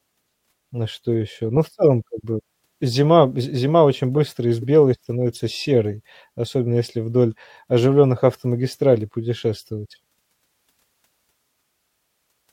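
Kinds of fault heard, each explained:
corrupt frame decoded: Short chirp-like blips break into the speech, a loud one spanning about two frames at 1.83 s before "как бы зима з", and a quieter one-frame blip at 4.62–4.64 s between "очень быстро из" and "становится серой". Damaged compressed frames were decoded anyway, misplacing energy in frequency.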